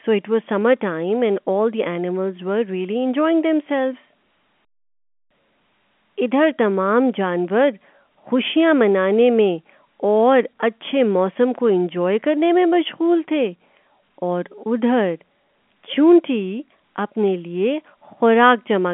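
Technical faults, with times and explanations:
No technical faults can be heard in this speech recording. It carries the narrow sound of G.711 telephone coding, with the band running from about 200 Hz to 3.4 kHz, nothing above 3.8 kHz, and only faint quantisation noise following the level.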